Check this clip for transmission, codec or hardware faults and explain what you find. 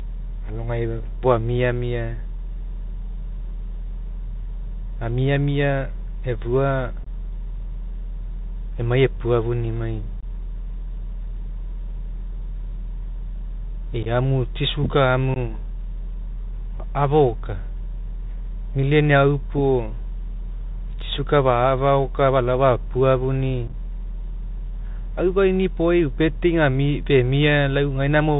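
Two faults are present: the whole recording passes through a Bluetooth CVSD headset codec, and five short bursts of unconcealed Bluetooth headset packet loss break up the speech.

The CVSD headset codec runs throughout at 64 kbps. It encodes each sample as a single up-or-down bit with an adaptive step. Nothing above 4 kHz survives, so the speech sounds narrowband. Sibilants turn scratchy, loud high content distorts where the step can't keep pace, and a granular hiss sits underneath.

The packet loss falls at 7.04–7.07 s just after "amiamia efua", 10.21–10.24 s, 14.03–14.07 s, 15.34–15.37 s just after "tsi sugar", and 23.68–23.74 s. In each, roughly 19 to 26 ms of audio is lost across several packets and replaced by silence or an idle pattern, not concealed. The gaps have hard edges and leave a brief rough chop.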